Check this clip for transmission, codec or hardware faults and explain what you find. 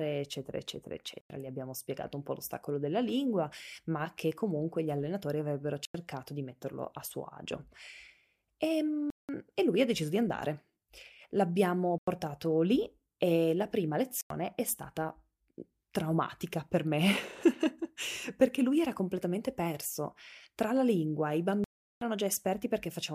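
The output buffer likely went unfilled six times, so each time a block of digital silence replaced the speech, cutting it out and back with no fade. The four 93 ms holes, at 1.21 s after "eccetera eccetera", 5.85 s between "comunque gli allenatori avrebbero" and "di metterlo a suo", 11.98 s before "lì e la prima", and 14.21 s, fit a 4096-sample buffer. The longer holes are 186 ms at 9.10 s and 372 ms at 21.64 s.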